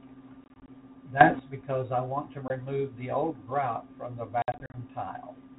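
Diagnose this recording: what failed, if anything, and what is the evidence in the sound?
The network dropped packets on the ADPCM call. Hard-edged silent holes appear at 0.44–0.70 s (about 100 ms lost in runs up to 20 ms, roughly five packets), 2.48–2.54 s (one 20 ms packet), and 4.42–4.75 s (160 ms lost, longest run 60 ms). Unlike a gain step, each hole is followed by slightly distorted speech that settles within tens of milliseconds while the decoder's predictor and step size resynchronise. The 32 kbit/s G.726 coding underneath is intact.

A sudden gain jump of about 13 dB occurs at 1.21–1.39 s. Speech and background noise rise together with no silent gap and no settling, which separates it from packet loss. The likely cause is a gain setting applied in call processing without a ramp.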